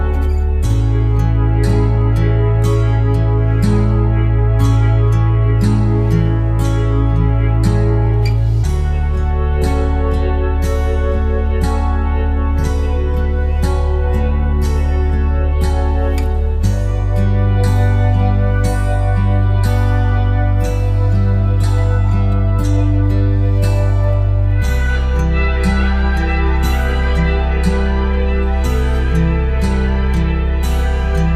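No technical faults can be heard in this audio. There is nothing to mark with a time or trace to a cause.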